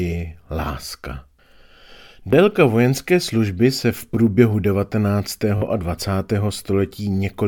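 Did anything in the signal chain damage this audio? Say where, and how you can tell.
Yes, there is Bluetooth stutter, a wireless-link (network) fault. At 2.31 to 2.33 s, just before "vojenské služby se v", a roughly 20 ms slice repeats, which fits a single late packet. At 5.58 to 5.62 s the repeat runs about 40 ms, consistent with two packets. The receiver replayed its last buffer until data arrived. Unlike a plain dropout, the gap is filled with a repeated fragment rather than silence, and the speech resumes further on, as if it had kept playing.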